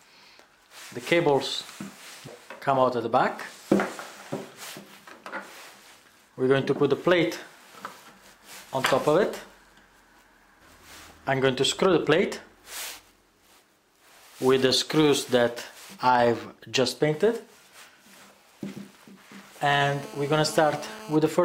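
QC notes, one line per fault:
19.69–21.16 s, GSM phone buzz: a hard, raspy buzz at 217 Hz with a dense stack of harmonics sits about 19 dB below the programme for roughly 1.5 s, holding steady and ignoring whatever the audio is doing. A nearby 2G handset on a call was transmitting in pulsed bursts, and some stage in the audio path rectified that radio energy, turning the burst rate itself into an audible tone.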